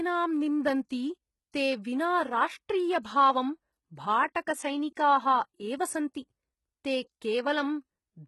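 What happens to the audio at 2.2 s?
At 2.2 s, as across the whole clip, the treble is rebuilt from copied lower bands, likely HE-AAC compression at a very low bitrate. That leaves heavy damage, nothing above 11.8 kHz, and gritty, metallic or lispy s sounds.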